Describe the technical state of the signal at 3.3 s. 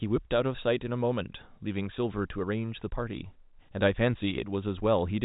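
At 3.3 s the speech is intact, with no fault present, only the band-limited sound of G.711 telephone coding that passes nothing above about 3.8 kHz.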